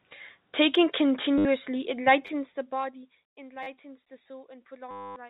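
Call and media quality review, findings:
Packet loss with last packet repeated: 1.38–1.45 s (70 ms) and 4.91–5.16 s (250 ms), robotic stutter buzzing near 100 Hz, consistent with 10 ms packets; jitter buffer/PLC. Waveform shows identical repeating segments; spectrogram shows harmonic comb lines.

Zipper noise: 2.09–3.19 s, ticking during a fall of about 20 dB, roughly 100 steps per second; gain stage without smoothing. Staircase envelope on the waveform, faint regular vertical ticks on the spectrogram.

Repeated buffer: 10 ms piece replayed twice at 2.27 s and four times at 3.63–3.67 s, giving a click and brief buzz; playback underrun. Waveform shows hard-joined copies; spectrogram shows vertical click lines.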